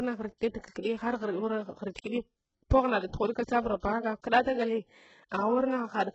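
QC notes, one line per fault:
throughout: HE-AAC compression. Nothing remains above 8 kHz, and the top band sounds rebuilt rather than real. S sounds are gritty and lispy. The damage is heavy. This is likely HE-AAC at a very low bitrate, around 8 kbps, with the treble copied up from lower bands.
0.38–0.41 s, 0.60–0.64 s, 3.80–3.83 s, 5.29–5.32 s: pre-echo. A short hiss leads each sharp onset by about 26 to 37 ms. The attacks sound soft and smeared. The codec spread its noise across the whole block, so it also filled the quiet moment before each attack.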